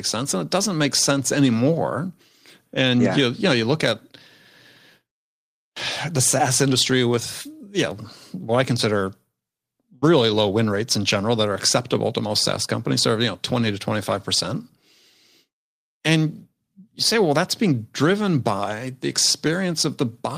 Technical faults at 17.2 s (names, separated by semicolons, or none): none